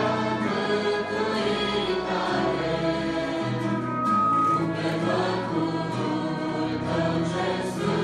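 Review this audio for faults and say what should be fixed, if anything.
Loudspeaker feedback squeal, 3.66 to 4.67 s: microphone-to-loudspeaker loop gain exceeds one at 1.2 kHz, so the tone swells over about half a second rather than starting at full level like an interfering whistle. To prevent it, lower the monitor gain, keep the microphone out of the loudspeaker's coverage, or notch 1.2 kHz in the monitor feed.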